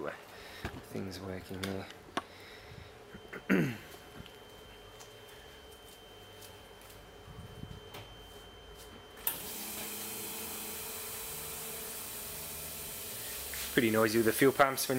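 From about 3.0 s to the end, a feedback whistle sits behind the sound: a thin, steady tone at 3.1 kHz, roughly 25 dB below the main signal, swelling and fading slowly in level. It most likely comes from a loudspeaker-to-microphone loop held just short of instability, so that one frequency keeps ringing at low level rather than building into a full howl.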